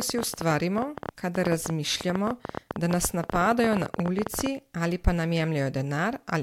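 From 0.01 to 4.47 s, a train of clicks ticks unevenly over the speech, about 13 per second, some fifty in all, standing well above it, likely from electrical interference or a faulty connection.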